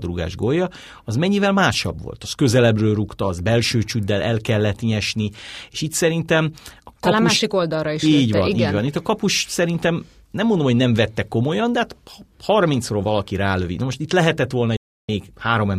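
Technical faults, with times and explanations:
14.76–15.09 s, digital broadcast dropout: just after "most itt lehetett volna" the speech cuts to silence within about 3 ms and stays muted for roughly a third of a second before sound resumes. Whatever was spoken in that stretch is gone, because the receiver muted while incoming frames failed. A 320 ms hole fits about ten lost frames. The waveform shows a flat line with near-vertical edges, and the spectrogram shows a clean blank column across every frequency band.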